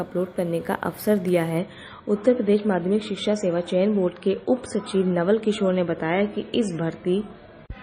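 From 1.58 s to the end the audio abruptly loses its treble above about 9.4 kHz and turns smeared and artefact-laden. This is an adaptive stream at a lower bitrate, consistent with an MP3 stream stepping down from about 128 to 24 kbit/s.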